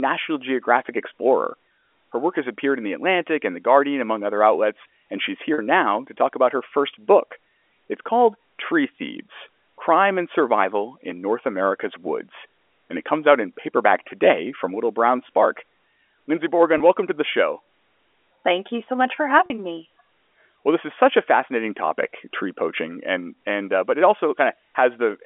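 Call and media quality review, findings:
Brief held, buzzy catches in the speech at 5.54–5.58 s, 16.78–16.80 s and 19.46–19.50 s. Packet loss with pitch repetition: receiver concealment loops the last pitch period across 40, 20 and 40 ms gaps, fitting two, one and two lost 20 ms packets, over a G.711 telephone line band of 300–3400 Hz.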